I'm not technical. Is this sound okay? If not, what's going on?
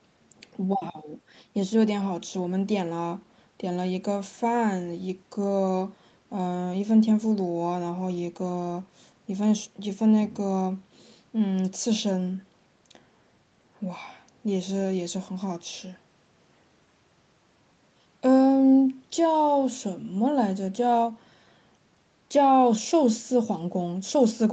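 Yes, it's fine: the speech sounds the way a normal internet call does, with the usual call processing softening the very top and bottom of the sound, and nothing is wrong with it.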